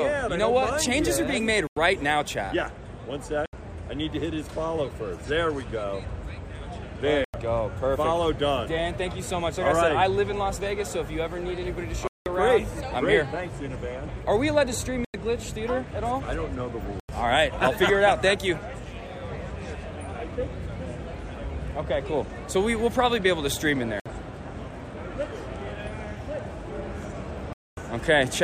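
Eight blocks of digital silence hit at 1.67, 3.46, 7.25, 12.07, 15.05, 17.00, 24.00 and 27.53 s. Each is a hard drop to silence. Four run about 93 ms, which fits an unfilled 4096-sample buffer. The 12.07 s gap is double that, and 27.53 s stretches to 240 ms.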